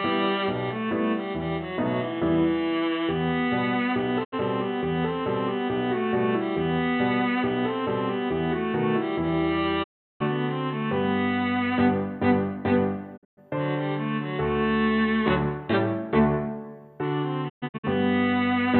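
The audio has four digital broadcast dropouts, where the receiver loses good frames and mutes, with a quick fade of about 20 ms, until clean data returns. There's a short 72 ms hole at 4.23 s and a longer 360 ms gap from 9.82 to 10.22 s. From 13.16 to 13.39 s and from 17.48 to 17.85 s the holes are scattered, each with a longest run of 120 ms. Whatever was sent during those gaps is lost.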